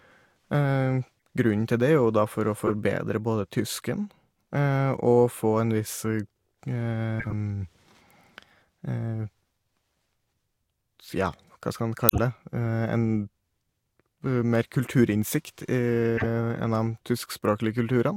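Speech, marred by five corrupt frames decoded and one stretch of compressed frames skipped. The corrupt frames sit at 1.17–1.21 s, 2.67–2.74 s, 7.19–7.33 s, 12.09–12.19 s and 16.17–16.25 s. Each is a short chirp or noisy blip spanning a handful of damaged frames that the decoder played anyway, misplacing energy in frequency. The first is quiet, at about -55 dBFS. The others are loud, peaking near -10, -15, -5 and -10 dBFS. Unlike a skip, these add foreign sound rather than jumping ahead. At 14.83–14.87 s a few milliseconds of audio are simply missing where frames were dropped. It is heard as a tiny jump forward.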